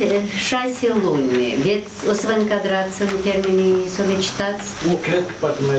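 Throughout the clip there is gain pumping, most likely from input gain set too high for the microphone with a fast limiter or compressor pulling it back on every loud sound. The level swings by around 10 dB, leaving loud and soft passages squashed closer together.

At 3.11 s and again at 4.13 s there are dropped samples, likely a tiny loss of only about a tenth of a millisecond each, so the waveform jumps straight to a later value. Neither removes any sound. Each is heard as a single sharp click and shows as a thin vertical line in the spectrum, while the call path's codec limits the top end at around 8 kHz.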